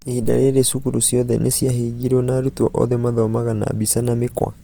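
Throughout the speech there is plainly audible Opus compression damage, likely from the CELT music mode at a low rate near 24 kbps. Bands short of bits are refilled with folded or noise content, so tones turn grainy and rough, while the spectrum still extends to 20.3 kHz.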